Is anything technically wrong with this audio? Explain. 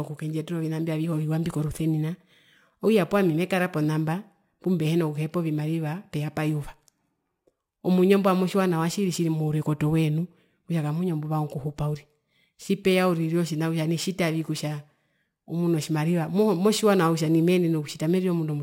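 Yes. Crude rate conversion runs through the whole speech clip. The sample rate was changed without any anti-imaging filter, apparently by repeating the nearest sample rather than computing new values. The pattern of repeats fits a step up from 32 kHz to 44.1 kHz. Because that repeat pattern cycles at a rate set by the two rates, the timing error produces tones unrelated to the voice, sitting around 25 dB below it. They are heard as a gritty, inharmonic fizz that rises with louder and brighter syllables.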